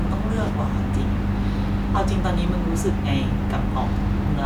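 No technical faults can be heard anywhere in the speech recording; the signal stays continuous and intact throughout.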